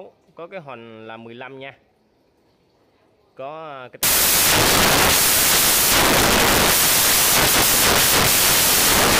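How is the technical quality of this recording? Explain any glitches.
Quality is poor in the second half. Samples built from the wrong bytes, from 4.03 s to the end: misassembled bytes make the low bits dominant, producing loud, harsh broadband noise, close to white on loud sounds.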